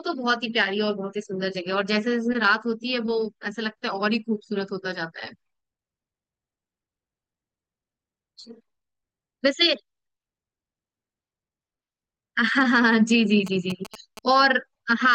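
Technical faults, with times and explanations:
13.47–14.19 s, GSM signalling bursts: a nearby 2G phone exchanging signalling traffic sent short groups of radio bursts that the audio circuit rectified, so a galloping dit-dit-dit of short buzzes at a 217 Hz rate rides under the speech, roughly 15 dB below it.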